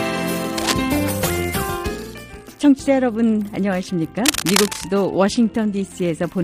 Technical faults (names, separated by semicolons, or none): cable scratch noise